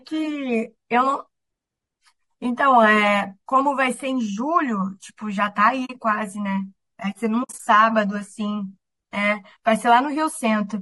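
Throughout the speech the voice sounds rough and grainy, with noise filling the gaps between harmonics and a synthetic-sounding top band. This is likely low-delay AAC compression such as AAC-ELD, whose short frames resolve pitch poorly, and the plainly audible damage fits a low bitrate near 32 kbps.

At 5.85 to 5.90 s the sound fades into a soft hole of about 40 ms. This is AAC frame loss with muting: the decoder zeroed the missing frames' spectrum and the overlapping windows eased the sound out and back in. From 7.43 to 7.60 s the same kind of loss recurs as scattered dropouts totalling 100 ms over about 160 ms, the longest gap lasting around 70 ms.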